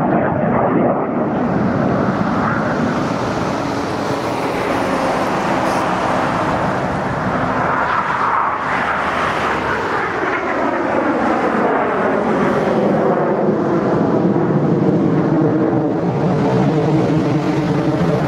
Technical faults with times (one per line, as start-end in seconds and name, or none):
15.28-18.27 time-stretched section